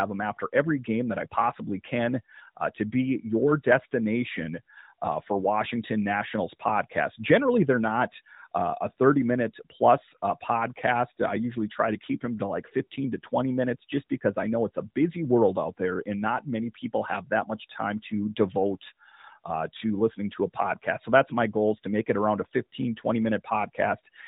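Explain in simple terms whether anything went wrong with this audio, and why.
Nothing went wrong here: the speech has the narrow, telephone-like sound of the AMR narrowband mobile codec, which carries nothing above 4 kHz, and that is simply how a mobile call is designed to sound rather than a fault.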